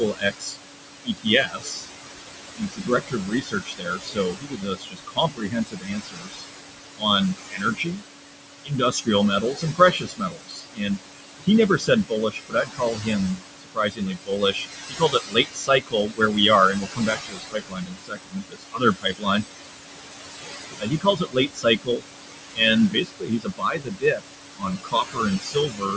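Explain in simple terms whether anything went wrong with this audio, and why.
A couple of things went wrong, both from the noise suppressor. First, noise suppressor artifacts run through the whole clip. The suppressor keeps pushing down the room's background noise. It does this hard, so the leftover noise pumps between and under the speech and can sound fluttery.

Second, there's speech cut by the noise suppressor in four stretches: 0 to 1.9 s, 2.43 to 8.03 s, 8.64 to 19.45 s, and 20.79 s to the end. The suppressor mistook quieter bits of speech for noise and turned them down too, so word endings and soft sounds come across swallowed, adding up to several seconds in the longer stretches.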